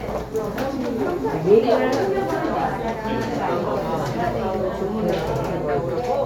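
No technical faults can be heard anywhere in this recording of sounds.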